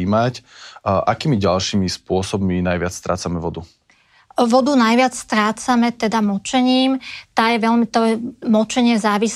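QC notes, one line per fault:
No fault was found.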